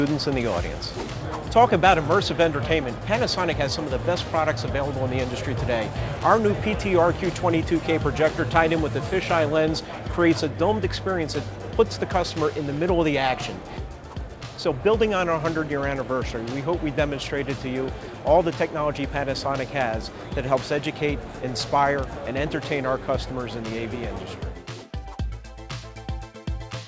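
Nothing's actually wrong here: the audio comes across as it should for a call, with the top end stopping at about 8 kHz, which fits a G.722 wideband call codec doing its normal job at 64 kbps.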